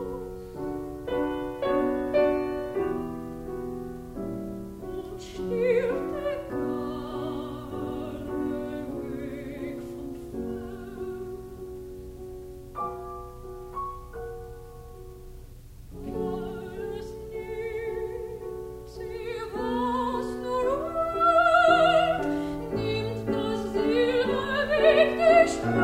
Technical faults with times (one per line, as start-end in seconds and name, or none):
none